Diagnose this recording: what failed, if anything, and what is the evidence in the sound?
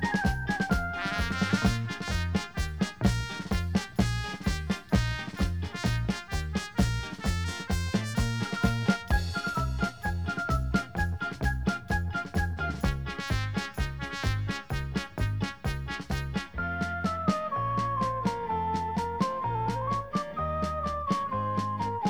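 Nothing failed here; no stage of the chain, from capture through conversion and transport to playback, leaves any audible fault in this recording. The sound runs continuously with nothing in it that points to a break anywhere along the path.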